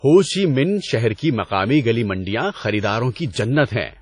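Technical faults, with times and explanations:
Throughout, WMA compression: the speech sounds washy and ringing, with a hiss that swells and fades with the signal and nothing above about 10.1 kHz. This is likely a low-bitrate transform codec, fitting roughly 32 kbps, zeroing weak spectral lines and spreading quantisation noise across long blocks.
1.15 to 1.18 s, pre-echo: between "ہو چی مِنہ شہر" and "کی مقامی گلی منڈیاں" a brief hiss of about 35 ms arrives just ahead of an attack, which sounds softened. The block's noise, sized for the loud onset, leaks into the quiet moment before it.
3.14 to 3.16 s and 3.32 to 3.36 s, pre-echo: two more onsets are smeared, preceded by hiss lasting about 21 ms and 38 ms. Each attack lands late in a transform block, so its quantisation noise fills the silence leading up to it.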